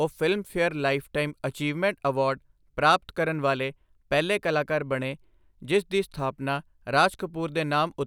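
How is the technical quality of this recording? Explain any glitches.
No technical glitches are audible in this recording.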